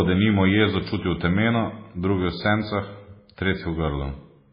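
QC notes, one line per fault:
throughout: MP3 compression, likely at a very low bitrate, as the sound fits about 16 kbps. Nothing remains above 5 kHz, so the speech is dull, and weak frequency lines switching on and off between frames give a heavy watery, swirling texture.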